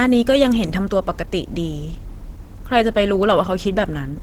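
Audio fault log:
Throughout: Opus compression. The speech comes across hoarse and a bit muffled, with a grainy, noisy roughness on the voiced parts, and the damage is plainly audible. The bandwidth still reaches to around 20 kHz, so it isn't dull from missing top end. This is likely Opus running in its hybrid mode at a low rate, which fits something near 16 kbps. Too few bits means the detail gets filled in with noise.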